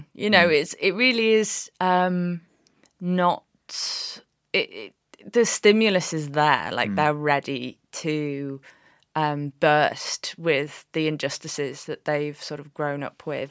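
No technical faults can be heard in this speech recording.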